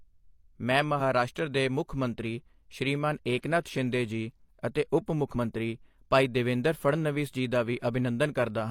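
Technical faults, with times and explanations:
5.31–5.36 s, damaged data in a compressed stream: a brief 50 ms glitch cuts across the speech where corrupted bytes made the decoder misread frames and lose sync until it found a valid header. Unlike a plain dropout or click, it comes from the decoder losing its place in the stream.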